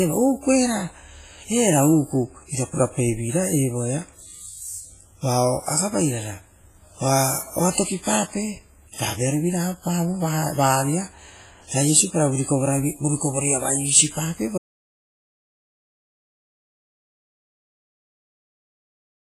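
From the start the speech carries a ringing, washy smear, with a hiss that rises and falls with the signal and nothing above 15.2 kHz. That points to heavy WMA compression, likely at around a 24 kbps rate, where long transform blocks spread quantisation noise over tens of milliseconds. This separates it from plain broadband noise. At 14.58 s the audio cuts mid-flow into total silence that lasts to the end. This is an audio dropout to silence. With no room tone or hiss left, it was likely a lost input written as silence, not a quiet pause or a fade.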